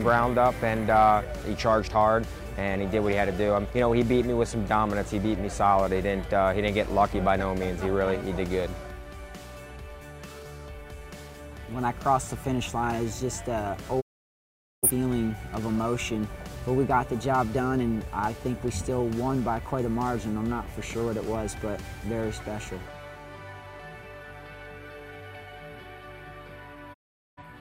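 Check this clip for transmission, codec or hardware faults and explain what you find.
Two digital broadcast dropouts occur, at 14.00 to 14.89 s and at 26.92 to 27.43 s. In each, the receiver stopped getting valid frames and muted, so the sound fades out over about 20 ms and is silent for roughly 0.81 s and 0.43 s. Nothing sent during those gaps comes back.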